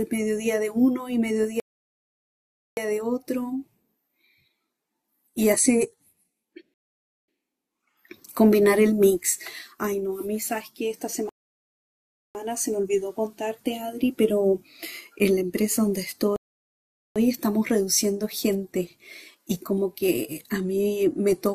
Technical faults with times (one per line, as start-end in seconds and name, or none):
1.60-2.77 rebuffering stall
6.74-7.28 rebuffering stall
11.29-12.35 rebuffering stall
16.36-17.16 rebuffering stall